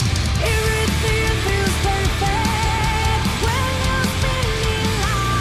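Overlap between stream segments causes a brief click or skip at 1.49 s and again at 3.48 s. The time stamps of neighbouring segments, which are 1 s long here, claim the same stretch of time, so the player discards the apparent duplicate even though that sound was never actually repeated. About 17 ms and 13 ms of audio disappear at the two points, and the waveform jumps across the gap, producing the audible discontinuity.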